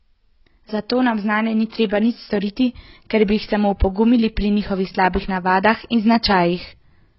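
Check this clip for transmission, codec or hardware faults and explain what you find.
Two faults are present: heavy codec damage across the whole speech clip, and one pre-echo.

AAC compression, throughout: Nothing is heard above about 5.6 kHz, and the speech sounds dull and smeared, with a warbling, fizzy texture on sibilants and held vowels. This is likely AAC-LC coding at a very low bitrate, about 16 kbps judging by the damage. The encoder lowered its cut-off to save bits and quantised the remaining bands so coarsely that gaps and substitute noise became audible.

Pre-echo, at 2.40 s: A brief hiss runs ahead of a sharp onset for about 19 ms, and the attack itself sounds softened. The transform codec spread quantisation noise evenly over its whole block. Because the loud onset came late in that block, noise sized for the attack also filled the quiet moment before it.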